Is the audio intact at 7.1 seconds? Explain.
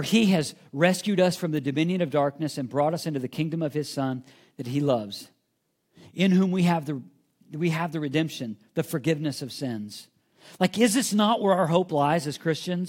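Yes, at 7.1 seconds the audio is intact, with no audible dropout, click, distortion or other fault at that moment.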